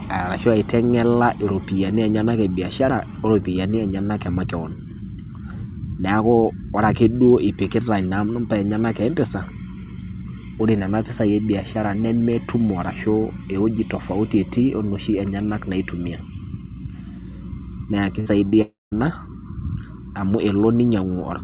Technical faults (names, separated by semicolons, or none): burst of packet loss; short concealed packet loss; long network dropout